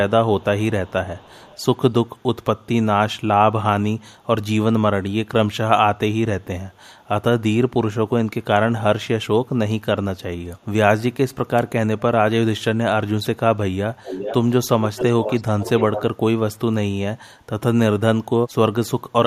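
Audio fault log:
0.40–0.45 s and 0.85–1.63 s, echo leak: the far end's echo canceller likely let some loudspeaker pickup through and sent it back. A faint copy of the speech, roughly 30 dB down, trails the original by about 307 ms, heard as a ghost behind the voice.
14.02–14.36, 14.82–15.05, 15.22–15.42 and 15.60–16.04 s, echo leak: the canceller is again likely failing to remove the returned signal, this time with about 413 ms of delay. The leaked copy is much stronger, around 10 dB below the speech and close to its level at 14.82–15.05 s, so a clear repeat overlaps the speech in bursts.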